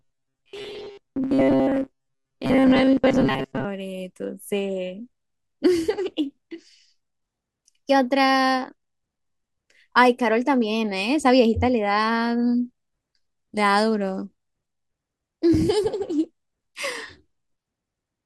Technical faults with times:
0.01-3.65 robotic sound from repeated short buffers

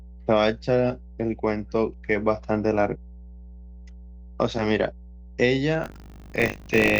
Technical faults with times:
0.00-6.99 mains hum
5.82-6.99 buffer tearing

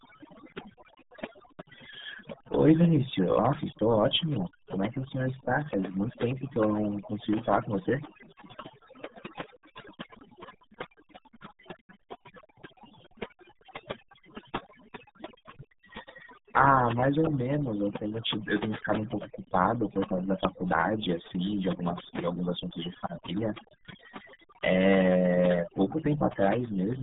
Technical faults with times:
0.00-27.02 overdone noise removal
0.00-27.02 RealAudio 14.4 codec

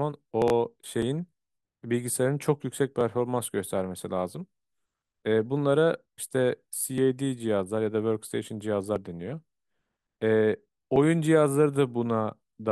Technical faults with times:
0.42-0.50 chunks out of order
1.02 overlap between stream segments
3.01 overlap between stream segments
6.98 overlap between stream segments
8.96 overlap between stream segments
10.96 overlap between stream segments

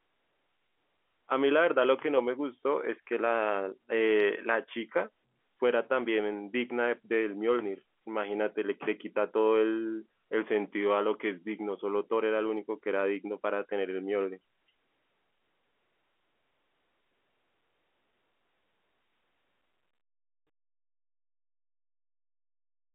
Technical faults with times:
none

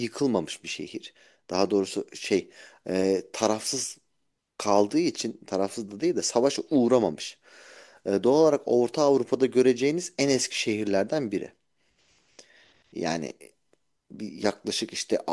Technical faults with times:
none

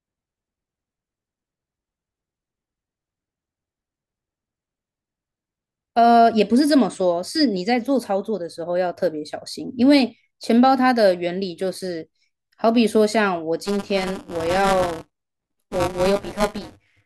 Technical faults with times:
13.64-17.05 buffer tearing

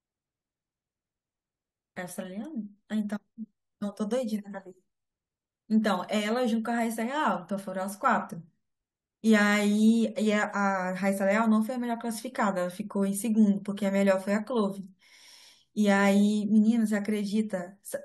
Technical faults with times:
none

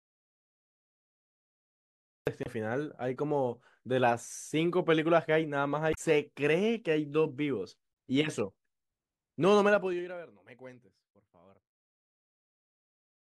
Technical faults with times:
0.00-2.27 audio dropout to silence
2.42-2.47 damaged data in a compressed stream
5.90-5.98 damaged data in a compressed stream
9.66-10.27 zipper noise

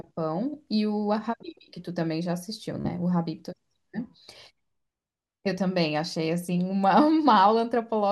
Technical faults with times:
2.81-2.88 Bluetooth stutter

